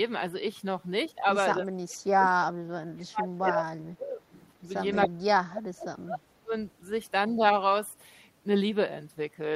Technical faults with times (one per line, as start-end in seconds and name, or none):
1.59-4.27 speech suppressed in double talk
4.92-5.08 echo leak
5.07-6.53 speech suppressed in double talk